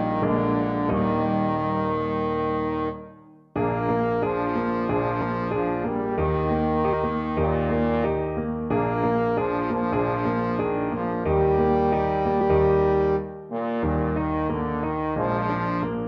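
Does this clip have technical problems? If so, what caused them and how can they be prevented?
Yes. Compressed frames are skipped at 6.92, 9.92 and 12.40 s. Whole frames never reach the output, so the audio jumps ahead by roughly 150 ms, then 100 ms twice. That fits several frames of about 23.2 ms each. To prevent this, check files for corruption after transfer and use a decoder that conceals damaged frames.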